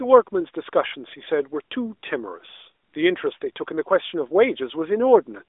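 No technical faults can be heard in this speech recording. It passes through the AMR narrowband mobile codec at 12.2 kbps, with the familiar telephone band of roughly 300 Hz to 3.6 kHz, nothing above 3.8 kHz, and only light coding colour on the voice.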